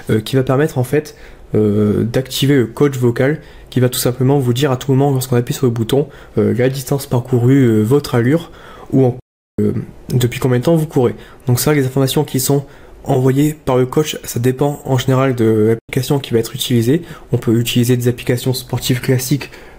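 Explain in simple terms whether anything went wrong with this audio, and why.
Two spots drop out completely, and it's a classic digital broadcast dropout. At 9.20 s the sound snaps to silence for about 0.38 s, coming back at 9.59 s. At 15.79 s there's a shorter hole of about 0.1 s. Each time the receiver stopped getting usable data and muted itself, with a very fast fade of just a few milliseconds, until clean data arrived again. Whatever played during those gaps is simply gone.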